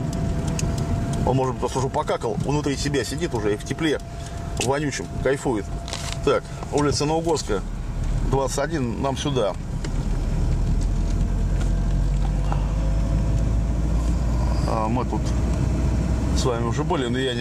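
No technical faults are audible anywhere in this recording.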